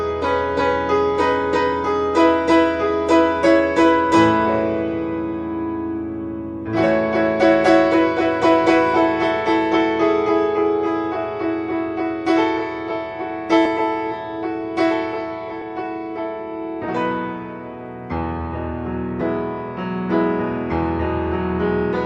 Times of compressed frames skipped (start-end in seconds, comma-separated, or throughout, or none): 13.65, 15.61, 19.21